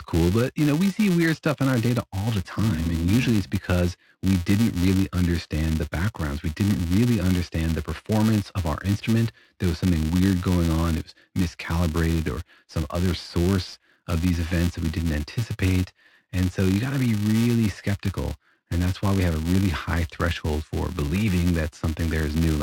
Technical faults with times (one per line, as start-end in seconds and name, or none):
0.00-22.62 filter restarted on every block